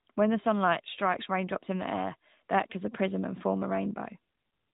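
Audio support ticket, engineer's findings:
AMR narrowband mobile codec damage throughout speech. Band-limited, nothing above 3.8 kHz. Buzzy, synthetic vocal texture from the vocal-tract model and sparse pulse excitation per 5 ms, which fits the AMR-NB 10.2 kbps mode. Damage plainly audible.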